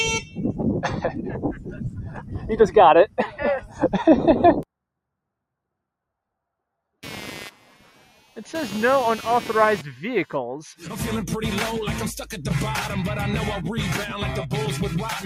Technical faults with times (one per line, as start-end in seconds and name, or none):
0.00-15.25 noise suppressor applied to music or sounds
0.00-2.77 sound cut by the noise suppressor
3.05-4.65 sound cut by the noise suppressor
7.03-10.37 computer activity noise